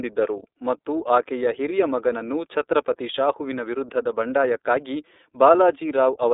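From start to finish, the speech carries the sound of the iLBC codec. The band is narrow. Almost nothing reaches above 3.8 kHz, and the line sits between 300 Hz and 3.7 kHz, so the top and bottom are gone. Each frame's excitation is coded on its own, with no help from the frame before. That leaves a plainly audible rough, synthetic edge. The framing fits 30 ms blocks at a rate near 13.33 kbps.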